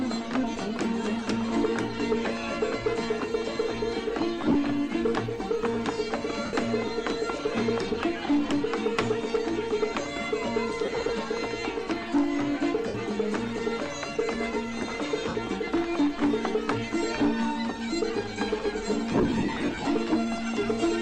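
Lost LE Audio frames at 4.41, 6.45, 10.85, 12.87, 15.28 and 19.11 s: the decoder refills gaps with the last spectrum, sign-scrambled, so sound smears noisily; the last stretch, scattered over 0.75 s, is the longest.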